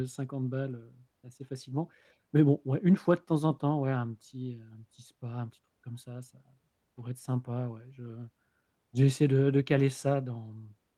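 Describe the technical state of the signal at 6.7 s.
The signal at 6.7 s is intact, with no fault audible at that moment.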